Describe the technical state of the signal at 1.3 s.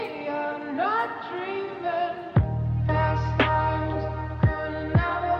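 At 1.3 s the signal is intact, with no audible technical fault at that moment.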